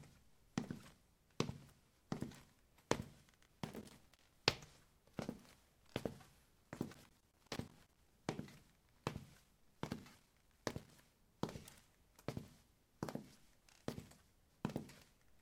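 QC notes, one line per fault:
3.47–4.33 s, 6.92–8.12 s, 9.33–11.09 s: loose connector crackle. A worn contact rapidly makes and breaks, chopping the sound into irregular scratchy bursts.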